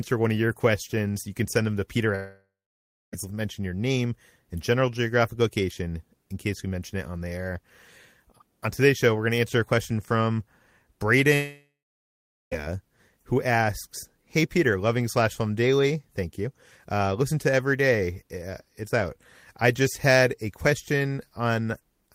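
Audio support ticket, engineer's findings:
Long network dropout, 2.15–3.14 s and 11.34–12.64 s: last sound smeared into fading buzz, then dead silence (0.61 s, 0.77 s) before speech resumes with material gone. Likely receiver concealment outrunning a network gap. Skipped content, not delayed, separates this from jitter-buffer stall.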